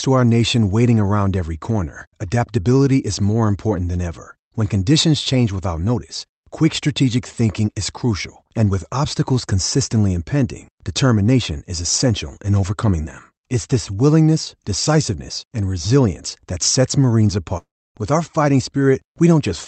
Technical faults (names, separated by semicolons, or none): long network dropout